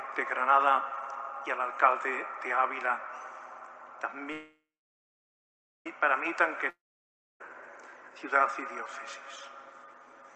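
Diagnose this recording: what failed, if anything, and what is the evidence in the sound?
A call audio freeze runs from 4.32 to 5.87 s, at the network and jitter-buffer stage. The last sound trails off as a fading buzz into about 1.2 s of silence, then resumes where it stopped. Nothing is lost, but everything after it arrives 1.5 s late, likely because delayed packets emptied the jitter buffer.

A long network dropout spans 6.70 to 7.41 s. After a brief decaying buzz there is about 0.63 s of silence, and when the audio returns roughly 0.7 s of material has been skipped. This is likely packet loss in transit, not a stall, since the receiver never recovered the missing stretch. The surrounding call audio shows a top end limited to about 8 kHz.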